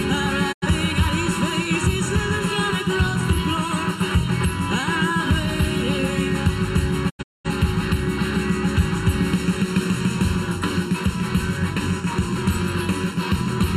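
Channel delay (comb filtering) runs throughout. One channel trails the other by under a millisecond, and summing them to mono cancels shared content at evenly spaced frequencies, the first notch near 700 Hz. The result is a constant hollow, phasey colouring.

Digital broadcast dropouts occur at 0.51–0.67 s and 7.08–7.49 s. The receiver muted while frames failed, fading out over 20 ms each time. The first loses about 85 ms. The second breaks into separate holes totalling about 300 ms, the longest about 210 ms.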